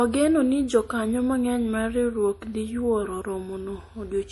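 Across the whole clip the speech sounds watery and swirly, with chirpy, metallic s sounds and nothing above 11.5 kHz. This is likely MP3 compression at a low bitrate, around 48 kbps, where weak frequency lines drop in and out between frames.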